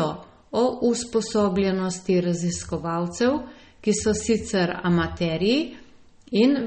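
This speech clip carries plainly audible MP3 compression from start to finish. Nothing reaches above about 8.4 kHz, a hard ceiling rather than a gentle roll-off, and weak detail flickers in and out from frame to frame, giving a watery, swirling texture with chirpy s sounds. That pairing of shimmer and a sharp ceiling, not plain dullness, separates it from simple low-pass filtering, and it likely comes from encoding at a low bitrate around 32 kbps.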